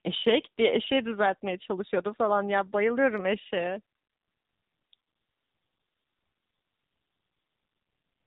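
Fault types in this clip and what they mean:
AMR narrowband mobile codec: Nothing above 4 kHz survives. The speech sounds plainly buzzy and synthetic, which points to a low mode around 7.4 kbps.
Lost AMR speech frames: From 1.88 to 1.91 s the speech briefly dips or warbles. This fits one missing 20 ms frame the decoder concealed.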